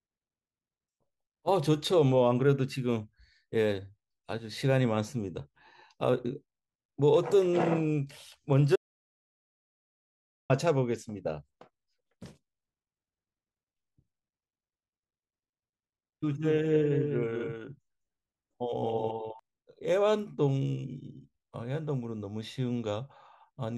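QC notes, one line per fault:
8.76–10.50 s: audio dropout to silence. The speech cuts off mid-flow and returns after about 1.74 s of silence, with no room tone. The waveform shows a dead-flat line and the spectrogram a fully black column. The input was likely lost while the recorder kept writing.
16.41–19.39 s: doubled audio track. A second full-band copy of the speech trails about 200 ms behind at roughly 5 dB down. It has no decay or reverb colour and switches on and off abruptly. The spectrogram shows each syllable's pattern repeated at that offset, and the waveform shows overlapping envelopes. A second, slower capture path is the likely source.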